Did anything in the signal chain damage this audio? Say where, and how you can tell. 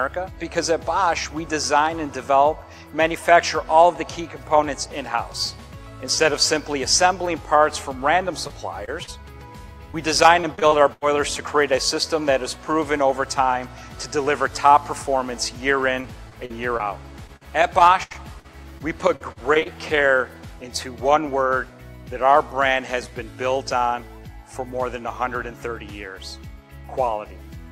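Yes. The damage happened on the network, with the decoder covering for it. Short concealed packet loss shows up three times, at 8.47 s, 8.85 s and 9.03 s. The first two holes are about 20 ms each and the third about 40 ms. At each one the receiver kept the previous sound going, then crossfaded back into the real signal. You hear a brief smear or wobble, and a short transient can disappear.

Repeated packet loss (robotic sound) affects three stretches: 9.92 to 11.04 s, 16.02 to 17.43 s, and 18.03 to 19.67 s. The network kept dropping or delaying packets, so the concealment never fully recovered. Gaps up to 84 ms long came close together, filling roughly a fifth of the first and last stretches and about a tenth of the middle one. The result is choppy sound with pieces missing.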